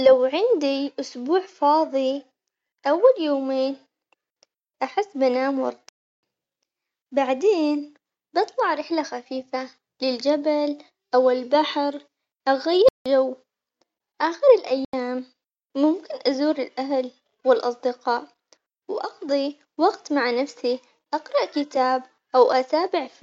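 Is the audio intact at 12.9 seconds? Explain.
No, there's a block of digital silence from 12.89 to 13.06 s: about 170 ms zeroed out, fitting an 8192-sample buffer left unfilled, so the speech drops into a short hole.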